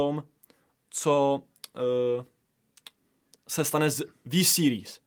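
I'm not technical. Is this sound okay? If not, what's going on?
Yes, nothing technically wrong can be heard anywhere in this speech recording.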